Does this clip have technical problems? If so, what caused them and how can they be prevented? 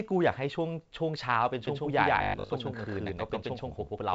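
Yes. From 1.67 s to the end there is a doubled audio track. A full-band copy of the speech, roughly as loud as the original, trails it by about 150 ms. This is likely caused by the signal being captured a second time through a slower path. Unlike a room echo, the copy has no decay or reverberant colour, and it starts abruptly. Routing each source through one capture path prevents it.

From 2.18 to 2.50 s the speech becomes a rigid, metallic buzz at 50 Hz. This is robotic sound from repeated short buffers: the last 20 ms is replayed while most of the real audio is skipped, likely because new audio arrives too seldom. The buzz follows the voice only roughly. Larger buffers or a less loaded audio thread prevent it.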